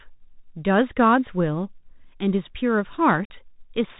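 Across the whole clip the speech sounds boxed-in and dull, with nothing above about 4 kHz, a grainy hiss sitting beneath it, and scratchy, roughened s sounds that distort where the voice gets loud and bright. This is the Bluetooth CVSD headset codec, which fits a 64 kbps link: each sample is coded as a single up-or-down bit with an adapting step size, so fast, loud high-frequency movement outruns the step and the narrow band cuts off the top.

From 3.25 to 3.31 s the speech drops out into a hole about 49 ms long, with abrupt edges, and the voice returns briefly quieter before recovering. This is unconcealed Bluetooth headset packet loss: a run of short voice packets between headset and phone never arrived, and silence or an idle pattern filled the gap instead of any concealment, with the CVSD decoder's step size needing a moment to rebuild.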